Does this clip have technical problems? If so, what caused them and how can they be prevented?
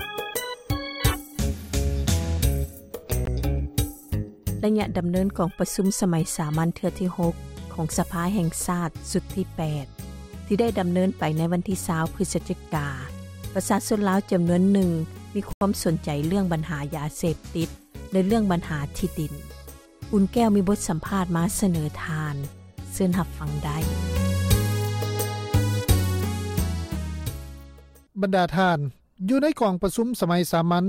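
Yes. There are two brief dropouts that sound like a Bluetooth stall. At 3.25 s the sound cuts to silence for about 18 ms. From 15.53 to 15.61 s it drops out again, this time for about 83 ms. The likely cause is radio interference delaying packets until the headphones' buffer ran empty. To prevent it, keep the phone close to the headphones and away from crowded 2.4 GHz sources such as Wi-Fi routers.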